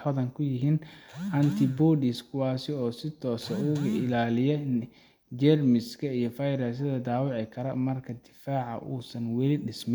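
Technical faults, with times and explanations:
No technical faults are audible.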